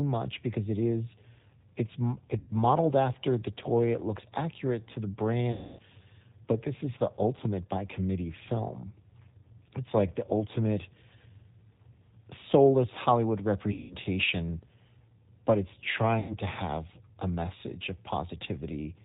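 From start to finish the speech runs through a G.729 codec, here the G.729A variant at 8 kbit/s, and the coding damage is plainly audible. The decoder rebuilds each 10 ms frame from a vocal tract filter, a pitch predictor and a handful of pulses, and cuts off everything above 4 kHz. The result is narrowband, slightly rough and synthetic.

VoIP packet loss concealed by the speech codec occurs four times: 2.39 to 2.51 s, 5.52 to 5.82 s, 13.72 to 13.95 s, and 16.20 to 16.36 s. The gaps cover about 90, 270, 180 and 90 ms of lost audio, which fits packets of 30 ms each. During each gap the decoder stretches its last pitch and filter state into a buzzy tone or coloured noise that fades as the gain drops frame by frame. The 270 ms gap near 5.5 s is the longest fade-out. Because each frame builds on the previous one, the speech stays weak or distorted briefly after packets resume.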